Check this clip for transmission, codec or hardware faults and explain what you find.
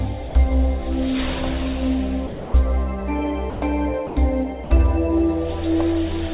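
Five short gaps where the audio gives way to steady noise point to sound dropped by the voice detector. They fall at 0.29 to 0.35 s, 2.27 to 2.54 s, 3.5 to 3.62 s, 4.07 to 4.16 s and 4.64 to 4.7 s, and they run from 60 to 270 ms. The likely cause is the sending side's voice activity detector misjudging these stretches as background and pausing transmission. The receiver then filled the hole with generated comfort noise, so the real sound vanishes under a bland hiss and returns when the detector fires again. Across the clip, nothing is heard above 4 kHz, which fits a G.711 mu-law call path at 64 kbps.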